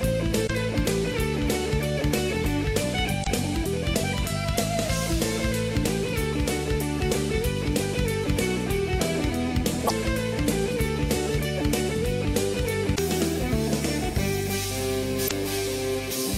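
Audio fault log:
0.43 to 15.31 s, damaged data in a compressed stream: five short disruptions, each about 70 ms, at 0.43, 3.20, 9.84, 12.92 and 15.24 s. Corrupted bytes made the decoder misread frames, lose sync and search for the next valid frame header.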